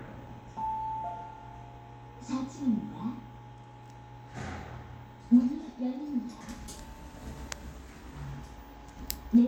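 From 6.76 to 8.24 s the sound runs about 5.5% fast and rises roughly 92 cents, close to a semitone, then snaps back to normal. This is likely a drift correction step: clock-matching software briefly jumped the playback rate to rebalance its buffer.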